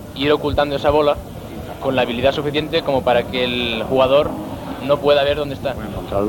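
No technical faults can be heard anywhere in the signal.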